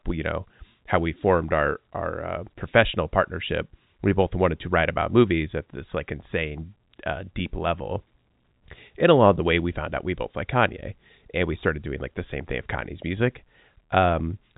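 No technical faults can be heard in this speech; it carries the narrow telephone band of G.711 coding, with nothing above about 3.8 kHz.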